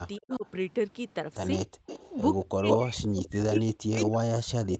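A speech recording from a call, with echo leak, speech suppressed in double talk, and background gated by the echo canceller. From 0.16 to 0.49 s a faint delayed copy of the talker trails the original by 223 ms, roughly 25 dB down. On a spectrogram it shows as a weak ghost of the same harmonic pattern, shifted right. It is likely echo leak: a loudspeaker on the far end fed the sound back into its microphone, and the echo canceller failed to remove all of it. A much stronger echo leak runs from 1.59 s to the end, 164 ms behind and only about 5 dB below the direct sound. That is close enough in level to read as a second overlapping voice, and the spectrogram shows two near-equal, staggered copies of each syllable. Over almost the same stretch as the first echo, from 0.18 to 0.46 s, the direct speech dips in pieces totalling roughly 200 ms, by up to about 30 dB. From 2.45 s to the end it is pushed down again, by as much as roughly 40 dB. 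The waveform shows notches and flattened stretches in the envelope. This is likely speech suppressed in double talk: with both sides active, the canceller could not tell the talker from the echo and turned everything down. Between 1.66 and 1.86 s the room background falls away for about 200 ms, by about 40 dB, a brief hole in the noise floor. This is background gated by the echo canceller, which clamped the microphone hard when the loudspeaker signal arrived and then let it go.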